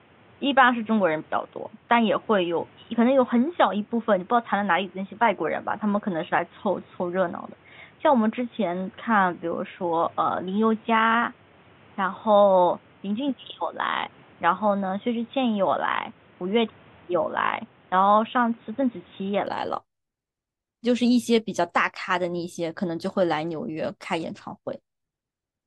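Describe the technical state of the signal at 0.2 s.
At 0.2 s the speech is band-limited, with nothing above 3.8 kHz, from 0.0 to 19.47 s, most likely from the input switched to a poorer device. Unlike a simple filter, it brings its own background noise about 30 dB down and a boxy tone, then clears at 19.47 s with no gap or level jump.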